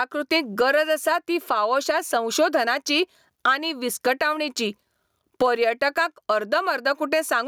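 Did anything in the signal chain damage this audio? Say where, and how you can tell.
Yes. Throughout, the gain swings about 20 dB, pulled down under loud speech, and the speech sounds squashed. This gain pumping is likely from excessive input gain driving a fast limiter.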